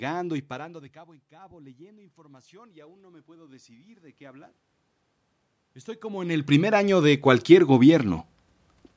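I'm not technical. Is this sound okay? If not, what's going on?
No. Automatic gain rising: twice, after the talker moves away around 0.5 s and 6.0 s, the call slowly turns the volume up (0.48–4.55 s, 6.01–8.13 s), so voice and room noise swell together.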